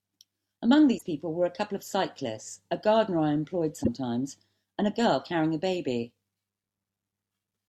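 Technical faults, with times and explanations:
0.97–1.03 s and 3.83–3.88 s, broken MP3 bit reservoir: the speech jumps ahead through a brief corrupted stretch, likely because dropped frames left the following 24 ms frames decoding another frame's reservoir bytes.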